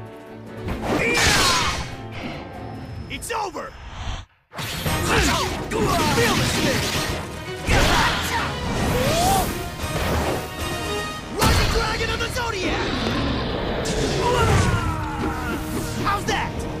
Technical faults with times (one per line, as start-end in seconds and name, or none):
13.07-13.09 loud pop